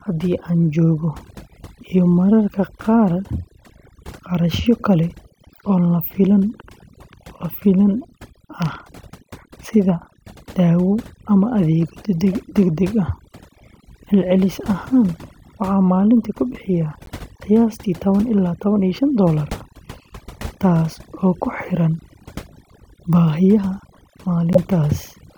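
Throughout the speech, overdone noise removal leaves the background near silent but dotted with twinkling specks. The reducer cut individual frequency bands it judged to be noise, taking quieter parts of the voice with them, so this is a steady processing artefact rather than isolated glitches.

The corrupt frame decoded fault appears three times. At 12.33 s, between "dawo ama adeegyo" and "degdeg ah", there is a short, fairly quiet glitch. From 17.06 to 17.09 s, after "waxaan maalintii ku bixiyaa" and before "qiyaastii tawan ilaa tawan", a brief glitch sits at a similar modest level. From 24.53 to 24.58 s, there is a much louder glitch. Each time, damaged frame data placed energy at the wrong frequencies.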